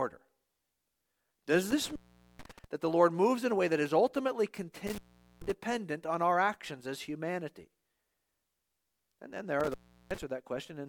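Intermittent contact cuts the speech three times, at 1.71 to 2.65 s before "that the", at 4.87 to 5.52 s after "way that is ultimately", and at 9.60 to 10.23 s after "then there". Each time a loose connection opens for about 0.44, 0.43 and 0.37 s. Crackle at the edges and faint hiss during the gap set it apart from a clean digital dropout.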